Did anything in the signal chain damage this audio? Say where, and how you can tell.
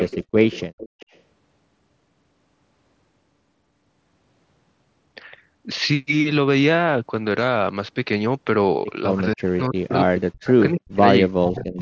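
Yes. A delayed copy of the speech trails by about 280 ms at 0.0–0.18 s and 0.51–1.2 s, roughly 10 then 20 dB down. This is likely echo leak from incomplete echo cancellation in call processing.

The speech dips and cuts out in pieces at 9.15–11.03 s and 11.22–11.82 s, falling as much as roughly 40 dB. This is likely speech suppressed in double talk by the echo canceller.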